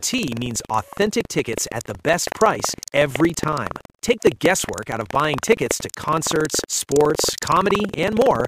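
Buffer tearing runs through the whole clip: a steady 21.5 Hz rattle, which fits a 2048-sample buffer, where the writer and reader have slipped. A small slice of each period repeats audio about a fifth of a second old, joined by hard edges, and the buzz is heard only while sound is present.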